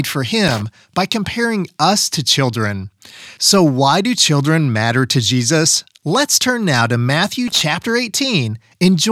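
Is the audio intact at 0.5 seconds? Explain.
No. Loose connector crackle runs from 0.48 to 0.62 s. A worn contact keeps breaking, chopping the speech into an irregular, scratchy crackle.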